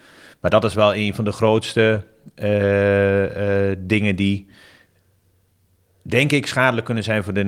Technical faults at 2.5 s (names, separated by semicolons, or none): scattered short gaps